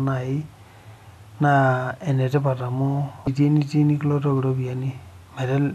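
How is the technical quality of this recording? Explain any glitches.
One glitch affects the recording, caused by damaged data in a compressed stream between 3.24 and 3.28 s. Corrupted bytes made the decoder misread frames and lose sync, producing a brief glitch.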